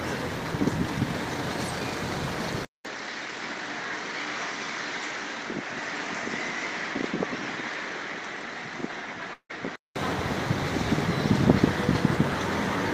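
At 2.65 s the sound changes abruptly. A gap of about 200 ms comes first. Then the audio turns dull and boxy, with nothing above 7.6 kHz. It is noticeably quieter, and a faint new background noise sits well beneath it. This is likely an input switched to a poorer device, such as a second microphone or a headset call profile. That device passes a narrower band and adds its own tone and noise. The duller sound lasts until 9.96 s, where the fuller sound returns.

Inside that stretch, from 9.33 s to 9.51 s, there is a long network dropout. The audio stops arriving. For about 159 ms the receiver keeps extending the last sound as a fading buzz. About 90 ms of silence follows. The sound then resumes further on. Roughly 160 ms of audio is missing and never played. This is likely lost network packets rather than a fault at the source.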